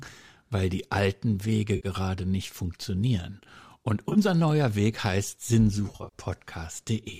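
Three smeared, phasey patches interrupt the speech, at 1.76 to 1.87 s, 4.07 to 4.18 s, and, longest and most broken-up, 5.88 to 6.18 s. This is AAC frame loss with concealment: the decoder patches missing frames by reusing the last good spectrum. In the second patch the gaps are short and scattered. In the third, losses totalling about 170 ms spread across 280 ms in runs of up to roughly 40 ms, so the smear flickers rather than holding steady. The light graininess underneath is likely low-delay AAC compression, consistent with a moderate bitrate around 64 kbps.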